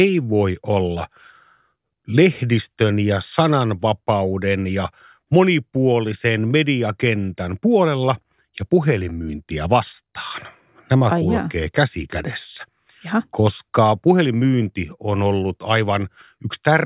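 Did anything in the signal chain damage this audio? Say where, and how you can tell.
No, no damage is audible.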